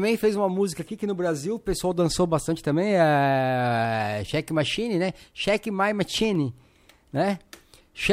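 A speech recording with a brief break in the sample stream at 6.35 s, likely dropped samples, where a fraction of a millisecond of audio went missing. The waveform jumps abruptly to a later value, producing one sharp click, too short to remove any audible sound.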